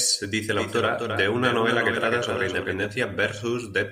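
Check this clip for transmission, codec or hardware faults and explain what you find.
One fault is present: a doubled audio track from 0.55 s to 2.87 s. Over that span the speech is joined by a second full-band copy trailing roughly 300 ms behind and about 5 dB quieter, so every syllable is followed by a repeat with no decay or room colouring. The copy switches on and off abruptly at both boundaries. The likely cause is the same signal arriving twice, through a second, slower capture path or an edit holding two offset copies.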